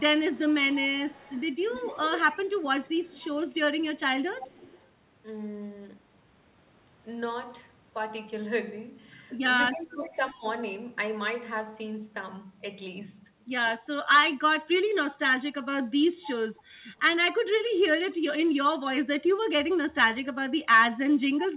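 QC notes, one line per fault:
0.32–1.99, 2.31–3.86, 4.31–4.86, 9.78–9.93 and 18.11–18.15 s, echo leak: the far-end echo canceller likely let loudspeaker pickup through, so a faint copy of the speech returns 285 ms late, about 20 to 25 dB down early on and near 35 dB down in the brief 18.1 s trace.
9.71–10.43 s, speech suppressed in double talk: with both sides talking, the echo canceller likely failed to tell near speech from echo and attenuated both. The speech dips by roughly 15 dB, in pieces adding up to about half a second, overlapping the echo leak at 9.78 s.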